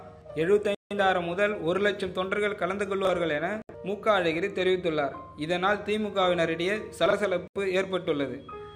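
A Bluetooth stall at 0.75 s cuts the sound to silence for 161 ms before it resumes, likely because interference held back packets until the headphone buffer emptied. Chunks out of order at 3.05 s: a 21 ms block plays one block late, giving a brief jumbled flutter. Another stall at 3.62 s leaves a 72 ms gap. At 7.06 s a chunk plays two blocks late, scrambling about 64 ms. A final stall at 7.48 s drops out for 80 ms.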